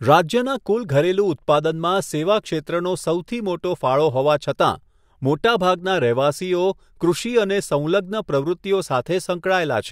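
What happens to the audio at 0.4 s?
Nothing goes wrong at 0.4 s; the speech there plays through cleanly, with no dropout, click, distortion or other fault.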